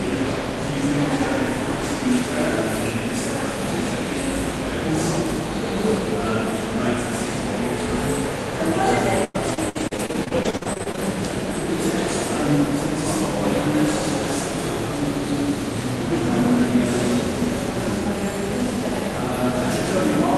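From 9.24 to 10.99 s the sound turns choppy and robotic: repeated packet loss leaves a quick run of holes, the longest 101 ms, each patched by stretching the previous sound, together about 30% of the stretch. That rapid recurrence and robotic smear set it apart from a single clean dropout.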